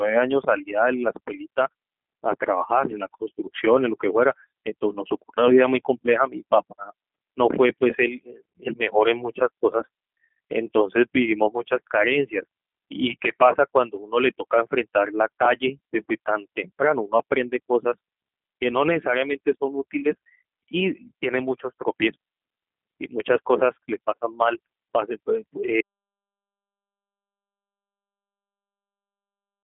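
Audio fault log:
Throughout, G.729 codec: the speech has been squeezed through a low-rate parametric voice coder, whose character fits G.729A at about 8 kbit/s. Rather than keeping the waveform, it rebuilds each short frame from a vocal tract filter, a pitch predictor and a handful of pulses, so the voice comes out plainly rough and synthetic. The sound sits in a telephone band of 200 Hz to 3.4 kHz, with nothing above 3.8 kHz, which makes it thin and muffled.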